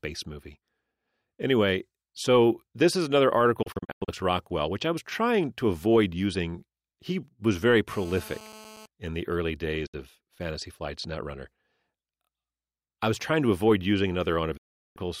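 Digital broadcast dropout hits this speech recording three times. From 3.62 to 4.09 s the sound breaks into several short holes, losing about a quarter of a second, with the longest gap 96 ms. At 9.86 to 9.94 s, right after "in the early", it cuts for 64 ms, and at 14.57 to 14.97 s, after "trying to avoid using", it cuts for 0.38 s. Each gap fades out within 8 ms, the way a receiver mutes when frames fail and resumes once good ones arrive. GSM phone buzz runs from 7.91 to 8.86 s, between "was very" and "in the early". It is a harsh, harmonic-rich rasp at 217 Hz, about 21 dB below the speech, produced when the audio circuitry rectifies a nearby 2G handset's transmit bursts. The buzz stays steady throughout, which points to an active call.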